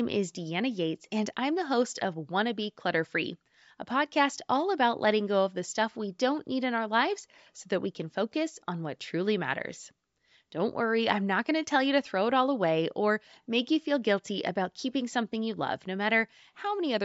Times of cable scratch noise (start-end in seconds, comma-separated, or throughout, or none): none